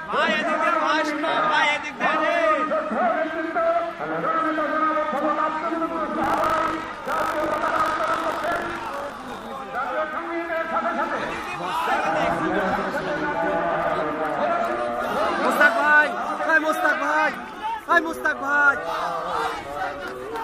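From 6.22 to 9.47 s there is buffer tearing. The writing program and the playback hardware have slipped out of step. A small slice of each period replays audio from about 40 ms earlier. This produces a rattling buzz near 50 Hz, present only under sound.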